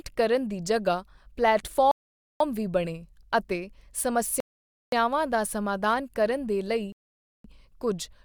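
The speech drops to silence three times and then picks up exactly where it stopped: from 1.91 to 2.40 s, just before "ਵੀ ਬਣੇ ਅਤੇ"; from 4.40 to 4.93 s; and from 6.92 to 7.44 s, right after "ਕਰਨ ਦੇ". Each is a rebuffering stall, where playback outran the downloaded audio and waited, adding about half a second each time without losing any sound.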